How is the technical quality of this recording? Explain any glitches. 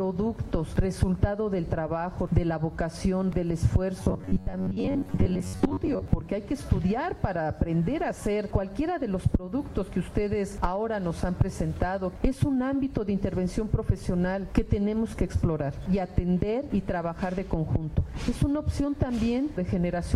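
One glitch stands out. Robotic sound from repeated short buffers, 4.03 to 6.1 s: with data likely arriving too seldom, about half the audio is replaced by looped slices of about 10.7 ms, forcing a rigid, metallic 93.8 Hz buzz.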